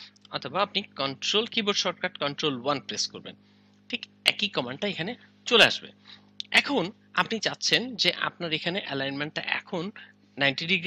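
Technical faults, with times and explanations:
Nothing stood out on listening to this recording.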